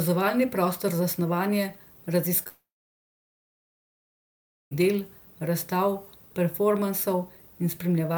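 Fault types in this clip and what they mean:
Short concealed packet loss: About 20 ms of speech at 2.43 s arrived too late or not at all, and the decoder bridged it by extending the preceding sound for roughly 24 ms before rejoining the real signal. It comes across as a brief smear or wobble. On a spectrogram the harmonics or noise just before the gap stretch on unchanged for a sliver, and the waveform shows a short, repetitive-looking stretch.
Long network dropout: From 2.48 s to 4.73 s about 2.24 s of speech never plays, most likely because the network stopped delivering packets. The receiver continues the last sound as a fading buzz or hiss, and then about 2.08 s of near silence follows until speech resumes at "del razstav". On the waveform this is a brief decaying tail followed by a flat, almost empty stretch. The spectrogram shows a blank band before energy returns abruptly.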